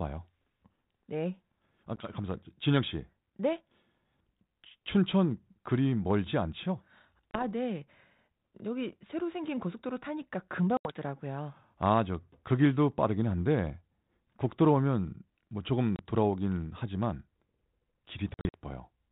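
Packet loss on an ADPCM call cuts hard-edged silent holes into the speech at 1.96 s (10 ms), 7.31 s (30 ms), 10.77 s (80 ms), 15.96 s (30 ms) and 18.34–18.60 s, where about 140 ms is lost in gaps of up to 50 ms. Unlike a plain dropout, each hole is followed by briefly distorted speech. The receiving ADPCM decoder's predictor and step size have drifted from the sender's and take some tens of milliseconds to resynchronise.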